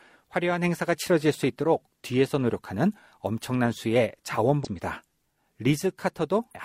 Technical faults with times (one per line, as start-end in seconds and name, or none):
4.60-4.66 compressed frames skipped
6.50-6.57 compressed frames skipped